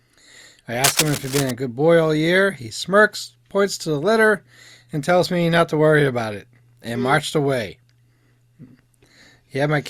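Cable scratch noise runs from 0.84 to 1.51 s, ending just before "a good boy all". For about two thirds of a second, a dense, uneven rasp of scratching and rustling sits over the speech, only a little quieter than the voice itself. The likely cause is a worn cable, connector or control being moved. Its contact resistance flickers rapidly, and those jumps turn into ragged bursts of noise riding on the signal.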